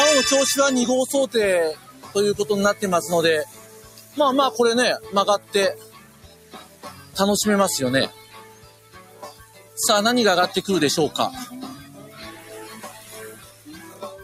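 A noise suppressor built for speech has been left running on sound it was never meant to process, and across the whole clip it keeps misreading sustained material and ambience as noise. Its gain swings by around 15 dB as it clamps down and releases, so the level pumps and breathes instead of holding steady. Unlike compressor pumping, which follows loudness, this tracks how steady the sound is: sharp onsets pass, held material sinks.

The clearest cases of sound cut by the noise suppressor fall at 1.75 to 2.15 s (about 9 dB down), 3.46 to 4.17 s (about 10 dB), 5.39 to 7.16 s and 8.1 to 9.77 s (about 11 dB each, the longest stretches), 11.85 to 12.5 s (about 6 dB) and 12.95 to 14.02 s (about 9 dB). In each, held or fading sound is turned down while sudden sounds mostly come through. That separates it from a dropout, which would silence everything abruptly regardless of the sound's shape.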